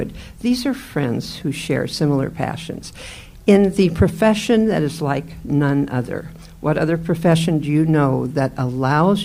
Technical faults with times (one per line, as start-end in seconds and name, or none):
none